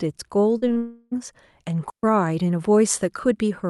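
Speech, with three short cases of concealed packet loss clustered early: 0.57 to 0.64 s (about 40 ms missing), 0.68 to 0.71 s and 0.73 to 0.78 s (about 20 ms each). In each gap the receiver kept the previous sound going, extending its pitch where the speech was voiced or shaped noise where it wasn't, then crossfaded back to real audio. The result is a quick smear or wobble. On a spectrogram these gaps appear as brief patches where the harmonics stay unnaturally steady or blur, and the waveform shows a repeated cycle joined smoothly at each end. Immediately after the third gap, from 0.78 to 1.13 s, about 0.34 s of audio is replaced by a continued, smeared tone that runs the whole length of the gap without dropping to silence. The most likely cause is a long network dropout, with concealment filling the entire gap. The spectrogram shows a frozen, slowly decaying harmonic or noise band instead of changing formants, and speech resumes at 1.13 s with that stretch missing. 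Later, from 1.90 to 2.03 s, there is a digital wireless dropout: about 134 ms of clean near-silence with a very short fade at each edge and no noise burst either side. In the waveform it is a flat hole with tapered edges, and the spectrogram shows a blank vertical strip. Across the whole clip, energy above about 12 kHz is absent, consistent with the Opus call path.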